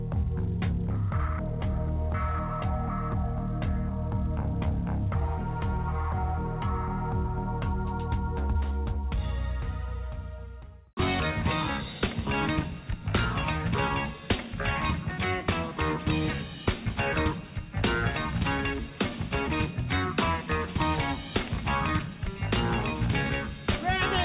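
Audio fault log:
11.2 s, skip ahead: the receiver discarded roughly 0.4 s of audio, likely after its jitter buffer overflowed with later audio already queued, and playback resumed beyond the gap with nothing filled in, so the sound jumps forward abruptly and the two sides are spliced almost directly together.
11.31–12.29 s, jitter buffer speed-up: with too much audio still held, the receiver trimmed short pitch-period pieces again and again, about a tenth of a second in total, so the sound runs roughly 10% fast at unchanged pitch and comes across as hurried.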